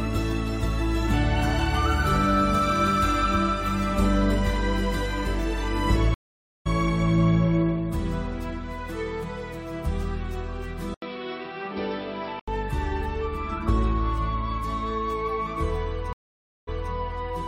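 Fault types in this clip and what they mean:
Stream reconnect: at 6.14 s and 16.13 s the connection dropped, leaving about half a second of silence. A fresh decoder resumed roughly 0.4 s later, then 255 ms earlier.
Input switched to a poorer device: from 10.94 to 12.48 s, after an 80 ms gap, the sound turns dull, a few dB quieter, with nothing above 5.5 kHz, likely a lower-grade input taking over.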